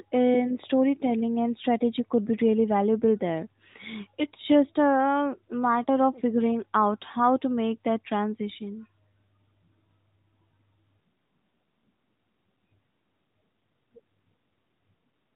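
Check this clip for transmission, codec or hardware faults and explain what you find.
No transmission, codec or hardware faults here.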